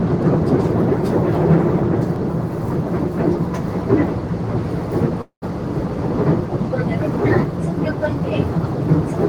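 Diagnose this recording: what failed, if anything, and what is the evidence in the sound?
A sharp click at 2.16 s is a repeated buffer at the driver or buffer stage: one 1.33 ms block, fitting a 64-sample buffer, replayed once when fresh audio arrived late.

From 5.21 to 5.44 s the sound smears into a fading buzz, then about 110 ms of silence, and resumes intact but later. This is a call audio freeze, likely network jitter emptying the receiver's buffer.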